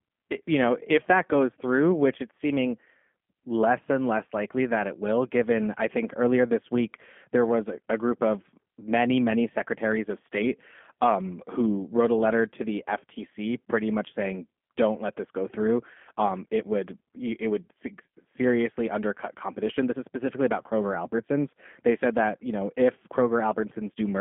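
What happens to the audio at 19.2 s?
At 19.2 s the G.729 codec damage present throughout persists: speech rebuilt from filter and pulse models sounds rough and synthetic, and a spectrogram shows nothing above roughly 3.4 kHz, consistent with 8 kbit/s coding.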